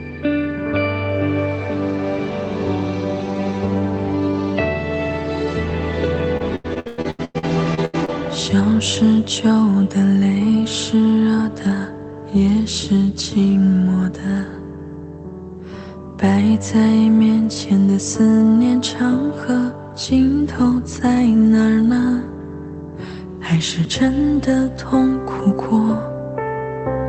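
From 6.37 s to 8.10 s the audio turns choppy and robotic, with a stuttering texture and small pieces missing. This is repeated packet loss: about a dozen holes fall in quick succession, the longest about 100 ms, and each is papered over by stretching the last received sound. Roughly 39% of that stretch is concealed rather than real audio, which produces the mechanical quality. The clip passed through a WebRTC-style call path with its top end limited to about 8 kHz, consistent with a low-bitrate Opus setting near 20 kbps.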